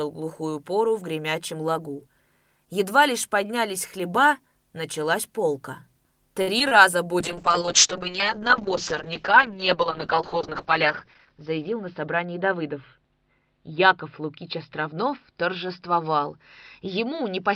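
At 6.41 to 6.49 s there is a short stall from a late packet. A packet arrived behind schedule, the jitter buffer ran dry, and the receiver stretched the last sound for about 58 ms before resuming where it stopped. Nothing is lost, but the playout now runs 58 ms later. Unlike a concealed loss, this sounds like a held prolongation with no gap in the speech.

Right after, two short concealed packet losses follow, at 6.59 to 6.62 s and 6.68 to 6.73 s. Here audio genuinely went missing, about 20 ms and then 40 ms, and the decoder papered over it with continued pitch or shaped noise before blending back. The result is a brief smear or wobble. This is what separates it from the stall just before, which only delayed the sound.

From 7.21 s to the end there is a call bitrate drop. The bandwidth estimate collapsed and the encoder went from 32 kbps to 7 kbps, holding at that floor for about 3.7 s. 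At that rate Opus narrows the audio band from 20 kHz to 6 kHz, so the speech turns muffled and rough. Because this is a lasting change in tone rather than a momentary glitch, it cannot be mistaken for the brief packet events.

Within that stretch, from 11.29 to 12.01 s, there is a jitter buffer speed-up. Excess buffered audio was trimmed by cutting pitch-period-sized slices, removing roughly a twentieth of a second in total, so playback runs at 107% speed. The pitch is unchanged, so the speech sounds slightly hurried rather than higher. That sets it apart from a resampling error, which would shift the pitch along with the speed.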